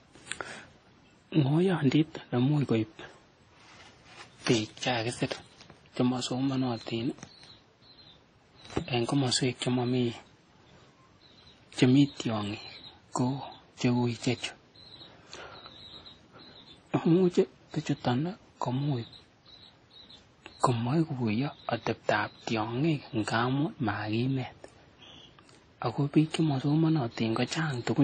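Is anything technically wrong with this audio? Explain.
Yes. Throughout the speech there is nothing above 9.7 kHz, and two different kinds of coding artefact are heard together. This is likely transcoding between lossy codecs, consistent with a low-bitrate WMA encode re-encoded as AAC-LC. The second encoder spends bits on the first encoder's artefacts and adds its own.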